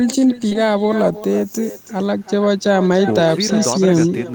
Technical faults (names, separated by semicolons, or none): echo with no canceller; short concealed packet loss